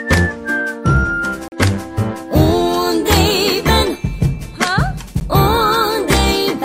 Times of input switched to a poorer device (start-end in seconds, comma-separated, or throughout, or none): none